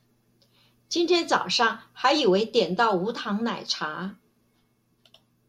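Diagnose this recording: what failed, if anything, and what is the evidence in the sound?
Nothing seems to have failed here; I listened all the way along and there's no fault in the speech to point to at any stage of the chain.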